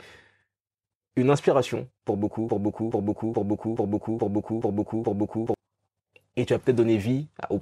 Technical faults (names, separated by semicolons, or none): broken-record loop